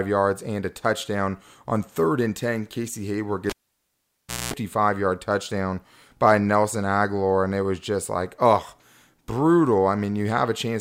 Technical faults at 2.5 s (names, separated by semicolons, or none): none